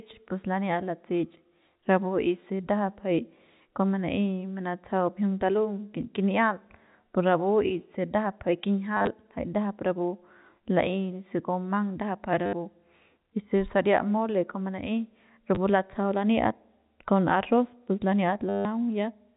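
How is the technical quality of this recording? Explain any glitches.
The recording has four short dropouts caused by packet loss with the last packet repeated. The audio is band-limited to telephone bandwidth, consistent with G.711 A-law coding at 64 kbps.

The dropouts fall at 8.97–9.07 s (between "ndajap jay" and "jay ndajap"), 12.46–12.53 s, 15.55–15.57 s and 18.49–18.65 s. In each one the receiver replayed the last good packet until fresh data arrived. The repeats ignore pitch period, and longer runs buzz at about 100 Hz, pointing to 10 ms packets. The 18.49 s gap is the longest, a robotic stutter.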